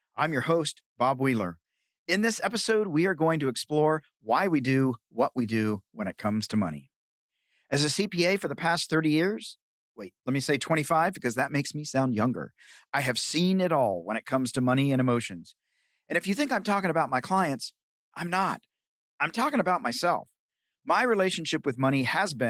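Nothing's wrong with this one: it's a speech clip that has been through Opus voice compression, and there's no technical fault to point to anywhere in it.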